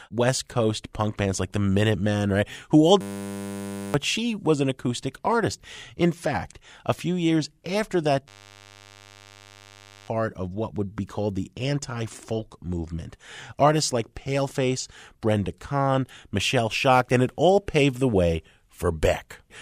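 A steady 100 Hz buzz replaces the speech from 3.01 to 3.94 s and again from 8.28 to 10.08 s. This is a system hang loop: the system froze while the sound hardware kept replaying the same 10 ms piece of its ring buffer. Each hang swallows roughly one and two seconds of audio respectively.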